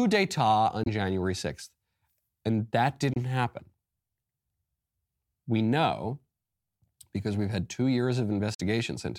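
The speech cuts out three times: 0.83 to 0.87 s, 3.13 to 3.17 s, and 8.54 to 8.61 s. Each gap is a silence with abrupt or briefly faded edges, about 23 ms for the first two and about 46 ms for the last. The speech resumes as if it had kept playing through the hole. This is a likely Bluetooth dropout, where packets missed their delivery deadline and were discarded. The gap lengths fit one lost frame in the first two and two in the last.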